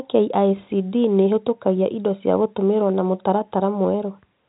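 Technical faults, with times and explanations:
No technical faults are present in this speech.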